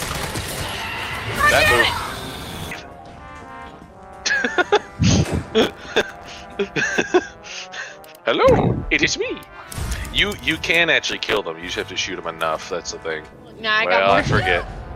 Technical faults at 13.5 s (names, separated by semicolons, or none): none